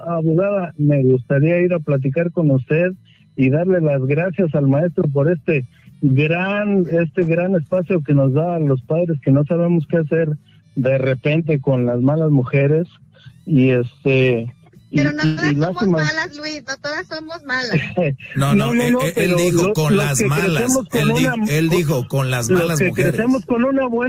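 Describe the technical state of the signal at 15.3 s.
At 15.3 s the sound briefly smears into a drawn-out, fading continuation of whatever came just before, then jumps ahead abruptly with a piece of the audio gone. This is a burst of packet loss spanning roughly 15.25 to 15.40 s. Several consecutive packets failed to arrive in time, so the receiver stretched the last audio it had across about 115 ms, attenuating it progressively, before picking up again, leaving roughly 120 ms of the original missing.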